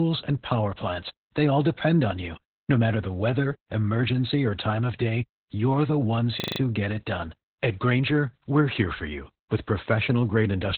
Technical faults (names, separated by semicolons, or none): Opus voice compression; system hang loop